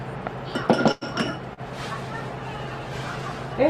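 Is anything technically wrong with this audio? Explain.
Yes, there are three separate problems stacked into a short stretch.

From 0.91 to 1.04 s there's a call audio freeze: the sound stalls and the last bit gets stretched out as a fading buzz for about 100 ms, with no true silence. Likely the packets were held up and the jitter buffer ran dry, so afterwards the audio simply resumes, now running about 100 ms later, with nothing actually lost.

Around 1.53 to 1.60 s comes a short concealed packet loss. Roughly 40 ms of audio never made it to the decoder, and the receiver patched the hole by extending what it last had, then blending back in. You hear it as a quick smear or wobble.

From 1.77 s to the end there's a call bitrate drop, from 96 kbps down to 15 kbps, sitting at the bottom for about 1.2 s. With that few bits the encoder codes much more coarsely and trims the top end, so the sound turns rough, watery or muffled.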